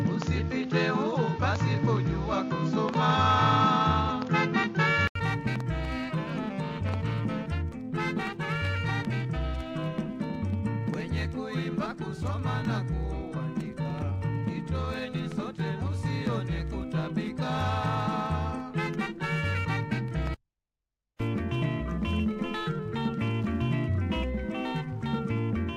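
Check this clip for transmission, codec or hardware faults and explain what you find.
Two faults are present, one in the input chain and one in the converter clock.

From 0.0 to 5.15 s, an input switched to a poorer device likely narrowed the band: nothing above 7.1 kHz, a duller tone, and background noise about 30 dB down. An 80 ms silence and a level change of about 5 dB follow at 5.15 s.

Throughout, sample clock jitter of under a microsecond mistimes samples, adding a roughness about 50 dB below the signal that grows on loud, bright passages.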